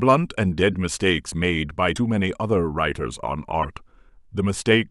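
Speech with three brief glitches, at 0.72 to 0.75 s, 1.95 to 1.98 s and 3.62 to 3.65 s. Each lasts about 30 ms, close to one 26.1 ms MP3 frame. The likely cause is a broken MP3 bit reservoir: frames went missing and the next frame read borrowed data from the wrong place.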